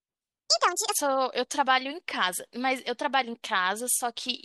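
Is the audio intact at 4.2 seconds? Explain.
Yes, the speech at 4.2 seconds plays through intact, with no dropout, click, distortion or other fault at that moment.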